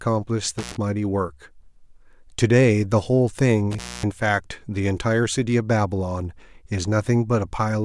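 A loose cable or plug in the signal chain of this speech recording briefly loses its connection twice, an intermittent contact fault. Each time the contact opens, the speech drops out with crackle at the break and the rejoin, and faint hiss remains while the line is open. The first event spans 0.58 to 0.76 s with a gap of about 91 ms. The second runs from 3.71 to 4.11 s and stays open for about 243 ms.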